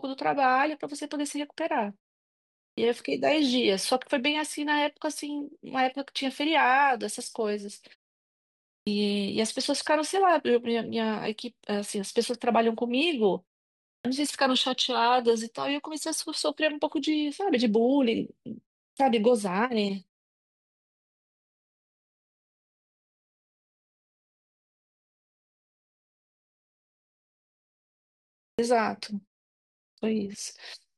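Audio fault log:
2.74, 8.83, 14.01, 18.93, 28.55 and 29.94 s: clipped start after a pause. Each time the speech resumes from silence, its first 36 to 40 ms are missing, so the word begins abruptly without its opening sound. The output device appears to go idle during the pause and needs that long to wake. This happens after pauses as short as 0.34 s and as long as 8.5 s. Muted pauses would only silence the gap, with no speech lost.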